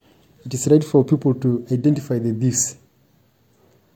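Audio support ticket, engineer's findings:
Layered smeary, swirly coding artefacts across the whole speech clip, nothing above 19.3 kHz. Likely transcoding between lossy codecs: MP3-type damage re-encoded through HE-AAC.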